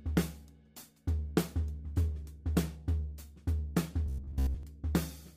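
From 4.06 to 4.63 s the sound collapses into a rigid, metallic buzz at about 66.7 Hz that still loosely tracks what came before. This robotic sound from repeated short buffers likely comes from starved playback looping the last 15 ms over most of the stretch.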